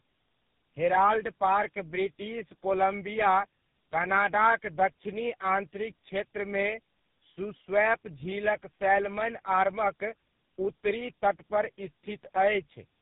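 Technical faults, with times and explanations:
Throughout: tandem speech coding. It sounds like three speech coders in a row, each recoding earlier damage. Speech turns rough, warbly and muffled, with nothing above 3.8 kHz.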